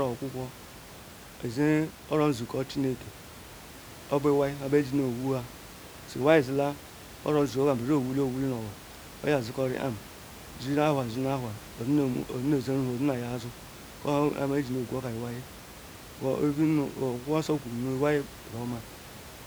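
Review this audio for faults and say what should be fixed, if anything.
No faults turned up in this audio, so nothing should be fixed.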